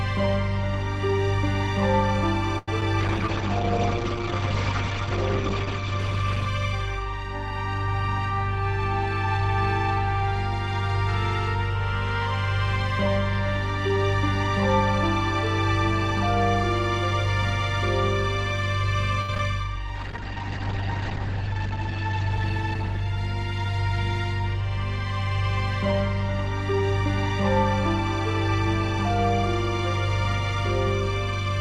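At 2.58 s the sound holds too long for about 91 ms, a short stall from a late packet. The jitter buffer ran dry, so the receiver stretched the last sound. Playback then resumed where it left off, with nothing lost and a slight buzz or dip.

At 2.81 s comes a short concealed packet loss. About 20 ms of audio never arrived in time. The gap was patched by continuing the last sound. It is heard as a brief smear or wobble.

From 3.01 to 7.54 s there is a call bitrate drop. The bandwidth estimate fell, and the encoder went from 48 to 13 kbps. The audio bandwidth narrowed from 20 kHz to 8 kHz. The sound turns muffled and rough, worst for about 2.7 s.

From 8.31 to 10.89 s the jitter buffer speeds up. Too much audio had queued, so the receiver trimmed short pitch-period pieces, roughly 70 ms in all. Playback runs about 2% fast at the same pitch.

From 19.21 to 19.40 s there is repeated packet loss, which gives a robotic sound. 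Three gaps come close together, the longest 71 ms. About half of this stretch is concealed. It sounds choppy, with small pieces missing.

From 19.96 to 24.06 s comes a second call bitrate drop, from 48 to 12 kbps. The bandwidth again falls from 20 kHz to 8 kHz. The sound goes dull and watery, lowest for about 1.8 s, then recovers.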